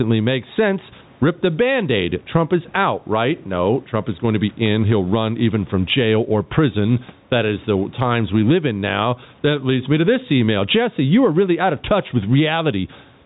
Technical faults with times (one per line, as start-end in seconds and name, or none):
0.00-13.26 gain pumping